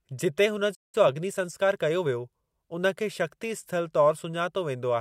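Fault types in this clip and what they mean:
Playback stall: Just after "जिते हुन", at about 0.74 s, the speech stops dead for roughly 185 ms and then continues. That resumption is what separates it from a dropout, where a piece of the audio is simply lost. A gap of this kind is most likely caused by the player running short of data or its output thread being blocked until it could feed the device again.
Time-compressed catch-up: From about 0.95 s to 2.17 s, right after the stall and ending just before "उन खे", the speech runs about 1.15 times faster than normal while its pitch stays where it was. The player is trimming its backlog by cutting out tiny pieces and cross-fading over the joins. Because the pitch does not rise, this differs from a plain resampling speed-up, which would sound higher and chipmunk-like.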